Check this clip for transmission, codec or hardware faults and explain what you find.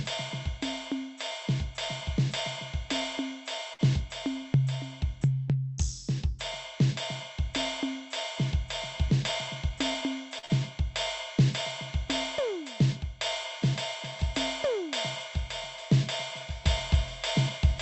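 The music has three kinds of fault: two short stalls from late packets, one jitter buffer speed-up, and one short concealed packet loss, all carried over a call path whose sound stops at about 8 kHz, which points to Opus at a moderate bitrate.

Short stall from a late packet, at 3.73 to 3.89 s and again at 10.38 to 10.45 s. Each time a packet arrived after its due time and the jitter buffer ran dry. The receiver held the last sound going, for 56 ms in the first case and 45 ms in the second, until the packet turned up, then resumed from the same point. You hear a held sustain with a slight buzz or dip, but nothing goes missing. That is what separates it from concealed loss.

Jitter buffer speed-up, from 9.08 to 10.02 s. Too much audio had piled up in the buffer, so the receiver trimmed tiny pitch-period slices over and over. Across that stretch it removed roughly 70 ms, playing at about 108% speed. 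The pitch stays put while the tempo pushes forward and feels rushed. That constant pitch distinguishes it from a clock or sample-rate error, which would shift pitch along with speed.

Short concealed packet loss, from 10.45 to 10.61 s, immediately after the second stall. Here 40 ms of audio never arrived in time. The decoder filled 44 ms by extending the preceding sound and then blended back into the real signal. The result is a brief smear or wobble, and the music in that gap is actually gone. Unlike a stall, the lost material is replaced by concealment rather than played later.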